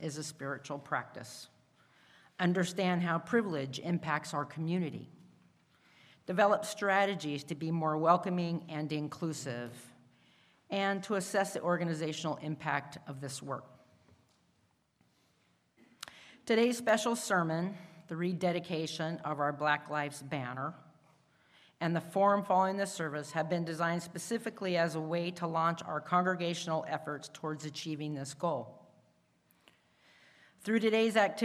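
At 16.89 s a single sharp click sounds, most likely from dropped samples: a fraction of a millisecond goes missing, so the waveform jumps abruptly to a later value. A spectrogram shows a thin vertical line spanning all frequencies at that instant.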